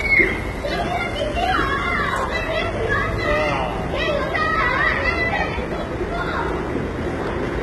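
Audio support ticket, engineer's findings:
Treble throughout sounds gritty and metallic, bright but synthetic, with nothing above 11.8 kHz. Likely HE-AAC compression at a very low bitrate, near 16 kbps: upper band rebuilt by spectral band replication from copied lower bands, harmonics misaligned across the crossover.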